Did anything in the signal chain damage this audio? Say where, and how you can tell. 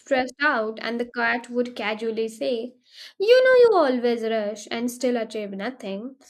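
No, nothing in this speech recording stood out on listening as damage from any stage of the signal chain.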